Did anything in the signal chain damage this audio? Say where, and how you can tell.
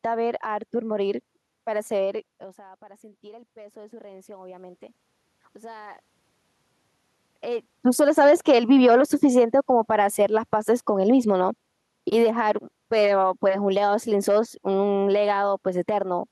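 Yes. From 2.24 to 4.81 s, the call processing's automatic gain rising stage responds to a drop of about 21 dB in input level. That drop comes from the talker moving away from the microphone at around 2 s, which is a normal event. The gain control slowly adds about 5 dB of gain over 2.6 s, so the voice and the room noise swell together. That shared swell is the giveaway: a talker coming closer would lift the voice but not the background.

From 10.88 to 15.48 s, the same call-processing stage shows automatic gain falling. Having judged the input too loud, or its background noise too strong, the gain control pulls its gain down by about 4 dB over roughly 4.6 s. The sound starts louder and then sinks gradually, and the room noise sinks in step with the voice. A steady bed of background noise dropping along with the voice marks this as the system's gain moving, not the source.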